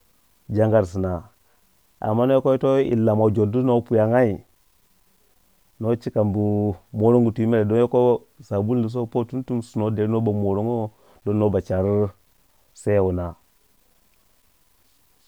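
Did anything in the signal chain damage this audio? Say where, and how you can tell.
Yes. Low bit depth without dither throughout: grain tracks the speech, about 45 dB down, which fits likely truncation to 10 bits during sample-format conversion.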